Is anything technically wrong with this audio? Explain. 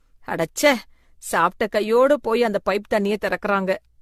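Yes. Throughout the speech there is generation loss: the audio sounds swirly, hollow and smeared, consonant attacks are blurred, and nothing is present above 14 kHz. The likely cause is repeated lossy re-encoding, roughly seven passes, in a way that fits an AAC encoder near 64 kbit/s. Each pass requantises on a shifted frame grid, so holes and noise accumulate. That buildup sets it apart from a single low-bitrate encode, which would sound cleaner at the same cut-off.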